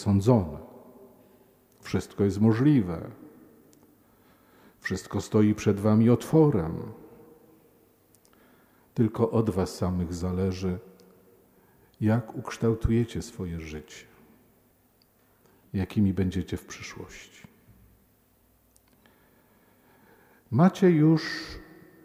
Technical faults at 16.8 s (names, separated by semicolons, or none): none